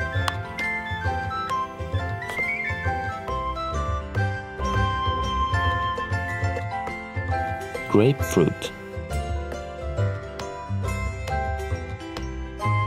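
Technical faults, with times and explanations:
4.59–6.59 s, doubled audio track: a full-band copy, about as loud, trails by roughly half a second, likely from a second capture path, showing as a clean shifted duplicate on the spectrogram and waveform.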